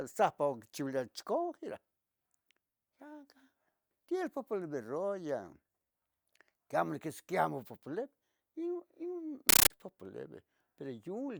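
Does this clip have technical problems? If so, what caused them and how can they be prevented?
Yes. From 9.49 to 9.70 s the speech is replaced by very loud, chattering static. This is a compressed stream played as audio. An encoded Dolby Digital stream reached the output as if it were ordinary samples and was never decoded. Each data frame sounds as a 13.3 ms burst of noise followed by silent padding, repeating 31.25 times a second. That pattern points to an AC-3 stream, likely at around 640 kbps. Setting the output to decode the stream, or confirming that the receiving device supports bitstream pass-through, prevents this.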